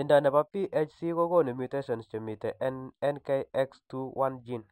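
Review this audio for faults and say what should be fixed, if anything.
Imaging from linear upsampling runs throughout the speech. A faint mirrored copy of the spectrum, around 40 dB down, fills 6 kHz to 12 kHz, which fits a 12 kHz source raised to 48 kHz by straight-line interpolation. On a spectrogram it appears as a pale reflection above 6 kHz, and it is heard as a slight metallic shimmer on sibilants. Resampling with a proper windowed-sinc or polyphase filter would prevent it.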